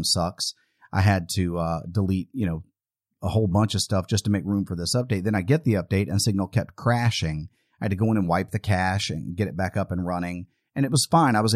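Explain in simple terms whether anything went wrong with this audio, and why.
Nothing went wrong with this speech recording; no faults can be heard anywhere in it.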